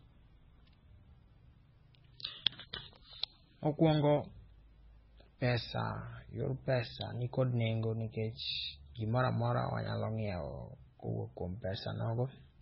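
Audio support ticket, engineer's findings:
Speech sounds watery and swirly for the whole clip, smeared attacks, sibilants chirpy and metallic, nothing above 5.6 kHz. Likely MP3 compression, starved encoder fitting a bitrate around 16 kbps: treble cut hard, weak bands flickering frame to frame.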